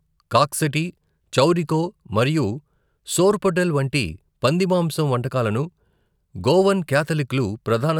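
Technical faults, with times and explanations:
Nothing technical stands out in this speech recording; no faults turn up anywhere along it.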